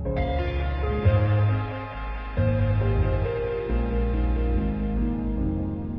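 From 0 to 4.0 s the adaptive stream is starting at a low bitrate. The treble is missing above about 11.5 kHz, with stronger codec artefacts, which fits a roughly 16 kbit/s HE-AAC stream. At 4.0 s the spectrogram fills out abruptly, without any waveform gap, consistent with a step up to about 96 kbit/s AAC-LC.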